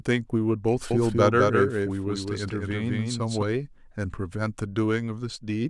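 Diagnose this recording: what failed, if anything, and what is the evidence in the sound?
A doubled audio track runs from 0.91 to 3.43 s: a full-band copy about 5 dB down trails by roughly 200 ms, starting and stopping abruptly, likely from a second, slower capture path.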